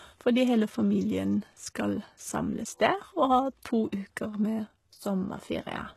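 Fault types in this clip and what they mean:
HE-AAC compression: The speech was likely coded with HE-AAC, which keeps only the low spectrum and rebuilds the treble from copied lower bands. Damage is heavy: s sounds turn gritty and metallic, nothing sits above 12.3 kHz, and the coding fits about 16 kbps.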